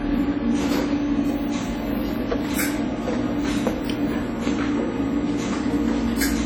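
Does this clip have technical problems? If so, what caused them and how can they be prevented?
Yes. Throughout the sound there is heavy transform-codec damage, most likely WMA compression at a low bitrate, fitting roughly 32 kbps. Long coding blocks smear quantisation noise over tens of milliseconds around each event, leaving a ringing, washy texture, and weak spectral detail drops out. A steady noise floor would stay constant, but this hiss swells and fades with the signal. The top end still reaches about 20.1 kHz, so the problem is damage within the band rather than bandwidth loss. Prevent it by keeping a lossless master and, if WMA must be used, encoding at a much higher bitrate.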